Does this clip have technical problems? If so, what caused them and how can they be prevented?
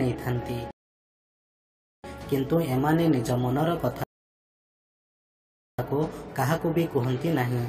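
Yes. Two rebuffering stalls occur, at 0.71 to 2.04 s and 4.04 to 5.79 s. The player ran out of downloaded audio, fell silent, then resumed exactly where it stopped. Nothing is lost, but 1.33 s and 1.75 s are added. A larger playback buffer prevents this.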